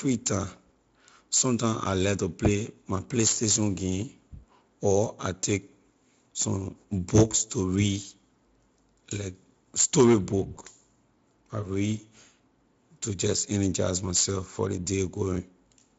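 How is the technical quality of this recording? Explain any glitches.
One brief glitch: VoIP packet loss concealed by the speech codec, at 10.55 to 10.59 s, just after "like story". About 20 ms of audio was lost, consistent with a single dropped frame. The Speex decoder extrapolated from its last pitch and filter state at falling gain, so the gap becomes a short buzzy tone or coloured noise that fades, with weak or distorted sound lingering for tens of milliseconds after.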